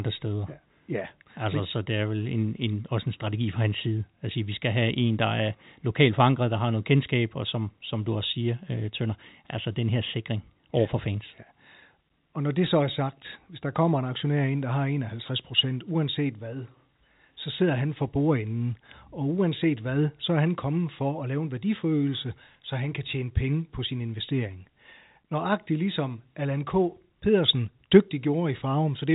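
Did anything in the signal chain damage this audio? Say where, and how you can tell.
No, nothing stood out on listening as damage from any stage of the signal chain in this speech.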